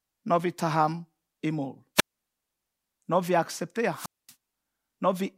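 At 1.96 s, just after "not we taham imol", the speech goes through a wireless microphone squelch dropout lasting until 2.13 s. The analogue FM link fades, hiss briefly rises, and the receiver's squelch mutes the output for about 130 ms before the speech returns. A second, longer dropout follows "we accept" at 3.92 s and runs to 4.34 s, with a muted gap of about 230 ms.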